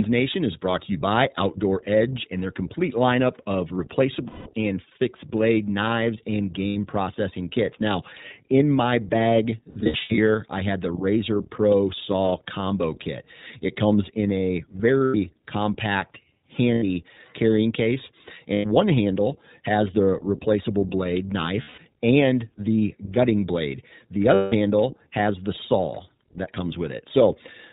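The whole clip passes through the iLBC codec at 15.2 kbps, which fits 20 ms frames. Nothing above 4 kHz survives. The speech sounds thin, rough and a little synthetic.

Lost iLBC frames cause eight dropouts. At 4.28 s, after "their complete lineup of" and before "and fixed blade knives", 180 ms is lost. Smaller gaps follow at 6.68 s and 16.74 s (80 ms each) and at 18.54 s (100 ms). Between 9.70 and 10.19 s, 300 ms is lost in short scattered bursts, none much longer than 70 ms. After "comes in a", 15.04 s loses 100 ms. After "has the replaceable blade", 21.62 s loses 160 ms before "and the gutting blade". At 24.34 s, 180 ms is lost. In each gap the decoder repeats the last pitch cycle mixed with noise, so it sounds like a held, buzzy vowel, fading over the longer gaps. Each iLBC frame decodes on its own, so the voice comes back almost at once.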